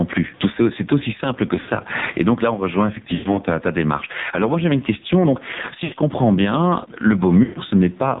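Speech, about 8 seconds long, carried over a narrowband mobile link with heavy AMR narrowband mobile codec damage. Everything above 4 kHz is missing, and the voice has a buzzy, synthetic quality, which fits one of the lowest AMR-NB modes at around 5.9 kbps. At that rate the vocal-tract model gets very few pulses per subframe, so the excitation sounds thin and the low-level background turns into a faint swirling warble rather than steady hiss. The level also breathes throughout. The background rises in each pause and drops sharply as each loud syllable arrives, with a swing on the order of 15 dB. Loud and soft passages end up squashed toward one level. This gain pumping likely comes from input gain set far too high, with a fast limiter or compressor clamping down on every peak. The room noise itself sits about 41 dB below the speech and is part of the recording. Four bursts of lost AMR speech frames interrupt the signal. 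The first, 1.60 to 1.70 s, follows "c'est aussi simple que". The second runs from 3.14 to 3.39 s. The third, from 5.84 to 5.94 s, comes just before "comprends bien le". The fourth, 7.44 to 7.60 s, comes right after "comprends bien le". The first and third erasures span about 80 ms and the second and fourth about 120 ms. In each, the decoder repeats the last good pitch and spectral envelope at falling gain, so the sound stretches into a droning smear, sinks toward silence and then returns weak or rough for a moment.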